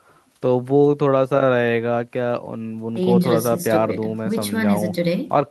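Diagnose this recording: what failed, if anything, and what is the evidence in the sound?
Nothing failed; no audible faults.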